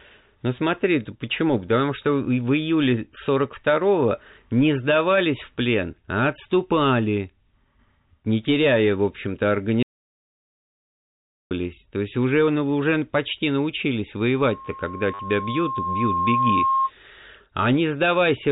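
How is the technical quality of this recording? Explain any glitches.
The recording has three kinds of fault: two brief repeated-packet stutters, a long dropout to silence, and a feedback squeal, all over telephone-band G.711 coding that keeps everything below 4 kHz.

Packet loss with last packet repeated occurs at 4.10 s and again from 15.14 to 15.19 s. Lost audio was covered by replaying the last received packet, and the 10 ms first gap points to 10 ms packets. The replays don't match the pitch cycle, so the first event is a small blip, and the second, lasting 50 ms, becomes a short robotic buzz near 100 Hz, the packet rate.

An audio dropout to silence runs from 9.83 to 11.51 s, about 1.68 s. The signal stops abruptly and returns abruptly, and the gap is silent with no room tone. The likely cause is a lost input, such as a disconnected device, a failed link or a momentary mute, while recording continued writing silence. 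Anything spoken during that stretch is lost.

A loudspeaker feedback squeal runs from 14.35 to 16.91 s. A microphone is picking up the loudspeaker it feeds, and at 1.1 kHz the loop gain exceeds one, so that frequency keeps reinforcing itself. It swells over about two seconds into a steady tone roughly as loud as the speech. The second packet-loss stutter falls within this squeal.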